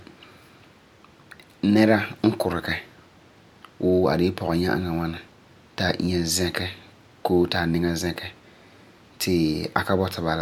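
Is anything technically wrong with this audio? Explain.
No, nothing technical stands out in this speech recording; it all sounds just as it should.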